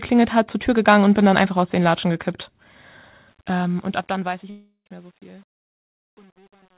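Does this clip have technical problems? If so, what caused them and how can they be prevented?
Yes. From 3.28 to 6.78 s, the fade-out turns gritty, worst from 4.08 s. This is truncation distortion on a fade, consistent with about 9-bit gain arithmetic without dither. Prevent it by processing fades at higher precision and dithering before reducing word length.

From 4.50 to 4.87 s, about 0.36 s of audio is missing. A fading buzz or hiss fills the gap, followed by roughly 80 ms of silence. This is likely a long network dropout, concealed by the receiver. Prevent it with a more stable connection, a larger jitter buffer, or forward error correction.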